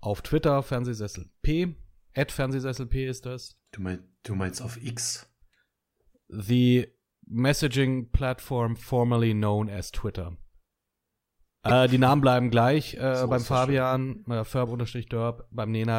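Corrupt frame decoded three times: bit errors reached compressed frames and the decoder played them anyway, misreading gains and codes so energy lands at wrong frequencies. From 3.46 to 3.52 s a faint chirp runs across what sounds like several consecutive frames. At 11.69 to 11.71 s a single damaged frame gives a sharp, loud squeak that stands well out of the speech. At 13.28 s a brief, quiet blip suggests a couple of frames hit.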